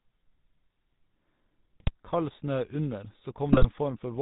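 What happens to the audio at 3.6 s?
GSM bit errors break up the sound from 3.50 to 3.66 s. Corrupted filter, pitch and gain values reach the decoder across what fits about seven 20 ms frames, producing squawks, pops and gargling. On a waveform, sudden level spikes appear; a spectrogram shows smeared, misplaced energy bands frame by frame.

The GSM full-rate codec colours the whole clip, including this moment. Coarse vocal-tract modelling with sparse pulse excitation gives a buzzy, gravelly roughness, and a spectrogram shows a hard ceiling at 4 kHz, consistent with a 13 kbps full-rate coder.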